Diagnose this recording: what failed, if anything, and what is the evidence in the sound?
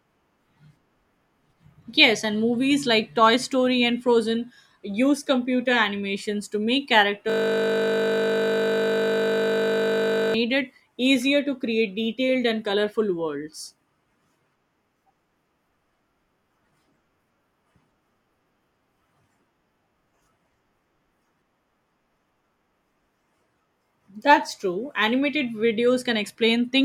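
System hang loop in the driver or buffer, 7.30 to 10.34 s: one 20 ms slice repeats as a 50 Hz buzz, showing identical waveform cycles and steady 50 Hz-spaced spectrogram harmonics.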